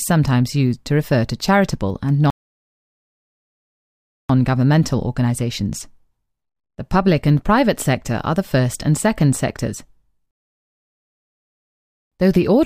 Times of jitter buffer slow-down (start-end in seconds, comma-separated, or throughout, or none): none